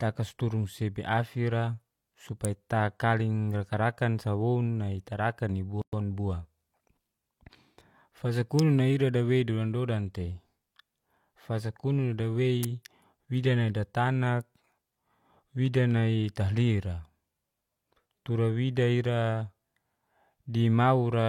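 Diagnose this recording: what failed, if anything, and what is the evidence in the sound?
Sharp snaps at 2.45, 8.59 and 12.63 s sit on top of the speech, likely an electrical switching spike arcing into the analogue wiring.

A gap at a join of encoded pieces opens a 113 ms gap at 5.82 s: untrimmed codec delay and end-frame padding survived the splice.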